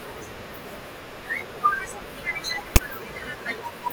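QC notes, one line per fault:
2.76 s, file tags played as audio: there's a very short, hard-edged burst of static in the speech here, lasting only about 8 ms. A block of text tag data got read as though it were samples. Since text bytes cluster in a narrow range of values, they come out as a loud, buzzy rasp pushed off to one side of zero rather than centred noise. That's why it's so abrupt and harsh instead of blending in.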